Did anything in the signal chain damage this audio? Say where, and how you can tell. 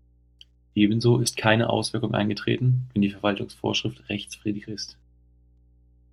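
Yes. The analogue wiring stage introduced mains hum: a steady 60 Hz tone runs under the speech for the whole clip, roughly 35 dB below it. A ground loop or nearby transformer coupled the power line in. Unlike broadband rumble or wind noise, it holds one fixed pitch.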